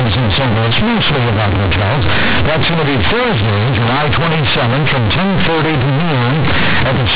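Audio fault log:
throughout, companded audio read as linear: the speech was stored as mu-law G.711 telephone bytes but is played back as plain linear 8-bit samples, with no expansion step. The logarithmic codes are taken at face value, so every change of sign throws the output across roughly half its range, and soft passages come out as loud as strong ones. The result is harsh, buzzy, overloaded distortion with heavy noise filling the pauses, within a telephone band that stops at 4 kHz.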